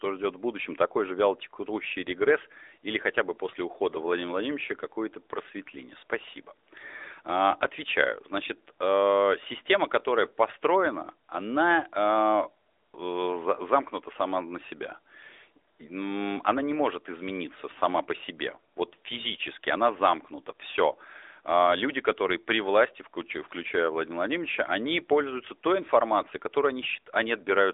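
AMR narrowband mobile codec, throughout: the speech passes through a band of about 300 Hz to 3.7 kHz. Each 20 ms frame is rebuilt from a vocal-tract model and sparse pulses, giving a plainly buzzy, synthetic edge, which fits a mid rate near 10.2 kbps.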